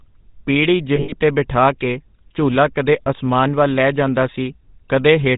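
Throughout the speech, the GSM full-rate codec gives a buzzy, gravelly roughness, plainly audible. The coder rebuilds the voice from a vocal-tract filter excited by sparse, evenly spaced pulses, which fits the 13 kbps full-rate scheme. On a spectrogram, energy stops at a hard ceiling near 4 kHz. Harmonics look smeared and grainy rather than cleanly striated, and the waveform shows a coarse, pulsy texture.

From 0.96 to 1.15 s, just before "ਤੇ ਬਿਠਾ ਕੇ ਝੂਲਾ", lost GSM frames break up the sound. About 100 ms of signal is missing, scattered over roughly 160 ms, and the longest gap is around 70 ms. The decoder repeats the last good frame, so the sound freezes into a rough, metallic ring. A spectrogram shows blurred, horizontally stretched bands. The waveform shows a repeating envelope in place of normal syllable shapes.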